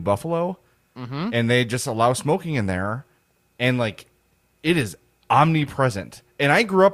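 A corrupt frame decoded at 5.61 to 5.67 s breaks into the speech as a short, artificial blip lasting about 60 ms. Bits inside a few consecutive compressed frames were damaged, yet the decoder rendered them as if valid, so misread gains and spectral codes placed energy at frequencies unrelated to the speech for roughly the span of those frames. The stray burst is fairly quiet, peaking at about -30 dBFS.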